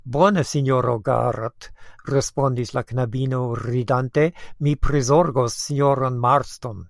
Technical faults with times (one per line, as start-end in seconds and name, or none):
none